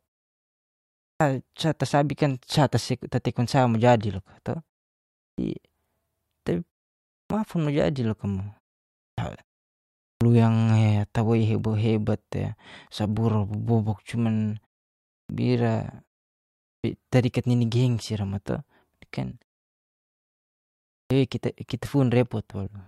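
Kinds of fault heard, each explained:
Clipped start after a pause: The output path goes idle during silence and needs a moment to wake before it passes sound again. Each time speech resumes, its opening is cut away. The first sounds vanish and the speech starts abruptly out of silence. This happens at 1.08, 5.24, 7.18, 9.06, 10.07, 15.17, 16.7 and 20.98 s. Between 120 and 140 ms is lost each time. The pauses before these run from 0.54 to 1.62 s.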